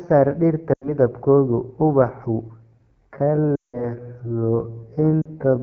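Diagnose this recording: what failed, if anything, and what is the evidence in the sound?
Codec stage: AMR wideband (HD Voice) codec at a rate that sounds like 8.85 kbit/s. The audio is plainly rough and raspy throughout, and a spectrogram shows detail ending near 6.4 kHz with shaped noise filling the band up to 7 kHz.

Network stage: lost AMR speech frames at 0.73–0.92 s (about 80 ms), 3.55–3.86 s (about 180 ms) and 5.22–5.29 s (about 40 ms). The decoder repeats stale parameters with falling gain, so the spectrogram shows frozen harmonics fading into a gap.

Processing stage: a time-stretched section runs from 2.63 s to the end at 0.551× speed, with pitch unchanged. The pace drags, and the waveform shows repeated short grains, likely from software stretching the audio to fit a length.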